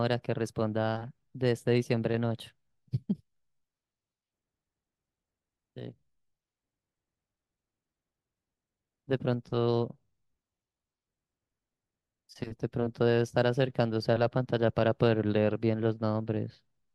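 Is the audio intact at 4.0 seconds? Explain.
Yes, the audio is intact at 4.0 seconds, with no technical fault audible at that moment.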